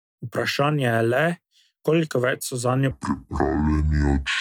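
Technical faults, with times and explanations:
2.91–4.41 s, section at the wrong speed: the closing stretch was likely played back against the wrong clock, at 0.6 times its recorded rate. Speed and pitch fall together, so the speech turns slow, drawn out and deep, sinking roughly ten semitones.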